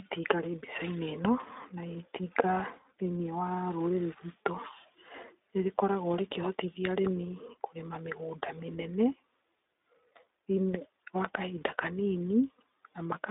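Throughout the speech, iLBC codec coding limits the band to about 300 Hz to 3.7 kHz, with nothing above 3.8 kHz, so a spectrogram shows an empty upper region. Coding each 20 ms frame independently, which fits 15.2 kbps, leaves plainly audible roughness and a synthetic edge.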